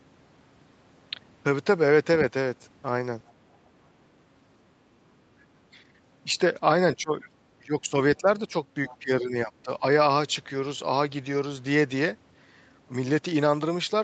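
From 6.95 to 7.41 s the speech dips sharply, by roughly 20 dB. It dips again from 7.60 to 7.94 s, briefly at 8.19 to 8.28 s and 8.47 to 8.54 s, and then from 8.99 to 9.83 s, with drops of around 10 to 15 dB. This is speech suppressed in double talk, likely caused by an echo canceller that could not tell the talker from the far end and turned both down.

A faint second voice, roughly 25 dB below the speech, slips through at 7.24 to 7.28 s and 8.86 to 8.97 s. This is the other side's voice leaking through, likely loudspeaker echo the canceller failed to remove. The band stops near 8 kHz, which fits the Opus call path.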